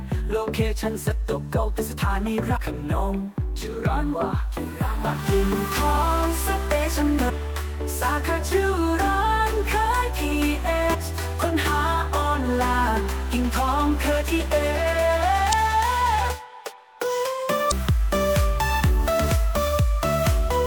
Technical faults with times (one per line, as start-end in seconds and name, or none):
2.56 damaged data in a compressed stream
7.29 damaged data in a compressed stream
10.93 damaged data in a compressed stream
15.49-15.54 damaged data in a compressed stream
17.68-17.73 damaged data in a compressed stream